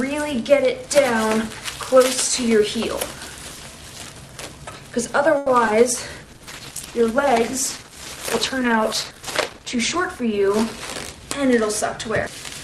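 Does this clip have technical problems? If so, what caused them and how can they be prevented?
Yes. Four network and codec faults occur.

At 5.37 to 5.48 s there is a short stall from a late packet. A packet arrived about 90 ms late, the jitter buffer ran dry, and the receiver held the last sound for those 90 ms before resuming where it left off, so nothing is lost but the sound drags briefly. A larger jitter buffer target would absorb a delay of this size.

At 5.66 to 5.69 s comes a short concealed packet loss. About 20 ms of audio never reached the decoder in time, so the receiver extended the preceding sound for 10 ms and then blended back, leaving a brief smear where that material dropped out. Forward error correction or redundant packets would let the receiver rebuild the missing piece.

From 6.21 to 11.36 s there is a call bitrate drop. The bandwidth estimate fell and the encoder went from 48 to 12 kbps, staying at the lowest rate for about 3.6 s, so the audio turns coarser and loses high frequencies until the rate recovers. 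A steadier connection, or a higher minimum bitrate setting, would prevent it.

From 11.13 to 12.29 s there is a jitter buffer speed-up. The buffer held more audio than its target, so the receiver trimmed short pitch-period slices, about 70 ms in all, and playback ran at 105% speed with unchanged pitch. Reducing packet delay bursts would avoid the buffer overfill that triggers it.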